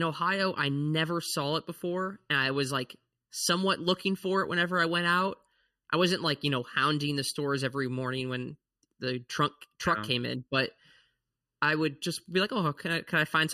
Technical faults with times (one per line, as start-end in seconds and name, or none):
0.00-13.53 channel delay (comb filtering)